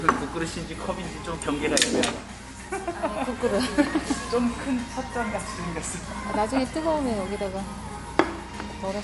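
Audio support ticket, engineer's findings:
Whole clip, 0 to end: watery, swirly texture, metallic chirps on bright transients, smeared attacks. Hard ceiling, nothing above 11.3 kHz. Likely MP3 compression at a starved bitrate, consistent with roughly 48 kbps. Encoder drops the treble band and zeroes weak spectral lines that flicker on and off frame to frame. Distinct from a plain low-pass or bandwidth limit: that dulls the top cleanly, without the warbling, chirping residue.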